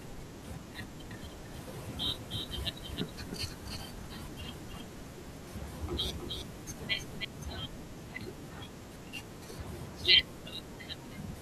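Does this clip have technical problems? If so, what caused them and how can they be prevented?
Yes: a doubled audio track from 1.11 to 7.25 s, with a second speech copy trailing by roughly 0.3 s, about 5 dB quieter, likely from a duplicate capture path. Prevent it by routing the microphone through only one recording path.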